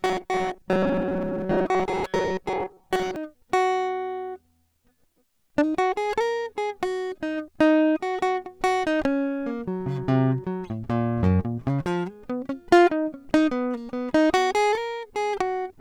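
From the very start, at 0.01 s, to 3.16 s, the music takes on a robotic sound from repeated short buffers. A rigid, metallic buzz sits on everything, fixed at 188 Hz. The music still moves underneath, but coarsely. The likely cause is new audio arriving too seldom. The gap gets filled by replaying the last tiny slice over and over, and for most of this stretch the sound is repeats. The real material in between is lost. A 188 Hz buzz fits a slice about 5.3 ms long.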